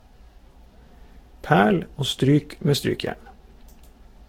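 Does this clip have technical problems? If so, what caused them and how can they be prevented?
Yes: the speech sounds swirly and hollow throughout, with blurred attacks and nothing above 16.7 kHz. That's likely generation loss from being lossily re-encoded, around seven times, at about 60 kbit/s. Keep a lossless master and encode only once, at the end.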